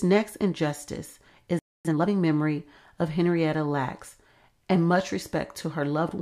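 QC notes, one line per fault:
1.59–1.85 s, playback stall: the speech cuts off mid-flow into 258 ms of dead silence, then resumes. A gap this abrupt and complete is most likely the player running dry of buffered data, or its output thread being held up, so nothing reached the output until it recovered. The sound then carries on rather than replaying what was missed.
1.85–2.09 s, time-compressed catch-up: right after the gap, the speech runs at about twice normal speed for roughly a quarter of a second, yet the pitch stays where it was. The player is working off the backlog built up during the stall by dropping short slices of audio and cross-fading across the joins. Those repeated splices give the passage a rushed quality until normal pacing returns.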